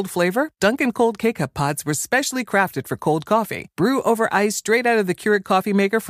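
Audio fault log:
No faults detected in playback.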